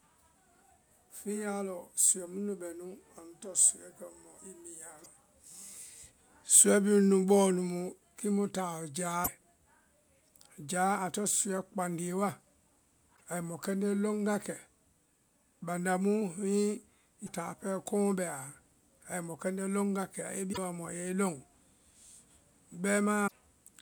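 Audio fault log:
5.03–5.06, 9.24–9.28, 13.15–13.21, 17.26–17.29, 20.52–20.58, 23.26–23.32 s: broken MP3 bit reservoir. Speech jumps ahead with a brief chirp or noise burst, likely from dropped frames decoding borrowed bytes wrongly. The spectrogram shows short broadband smears.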